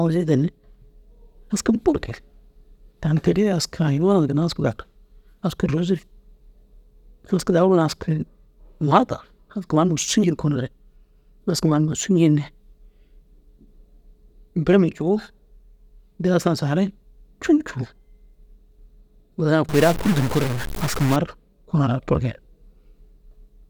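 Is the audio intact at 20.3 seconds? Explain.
No. From 19.69 to 21.16 s the speech shows a stuck bit, most likely a single data bit held at a fixed value by a broken line or converter. Samples that should have that bit flipped are pushed off by a step of about -25 dBFS, following the shape of the waveform, so the speech turns harsh and buzzy. Because that bit also flips with the sign of quiet samples, any pauses in this span fill with noise.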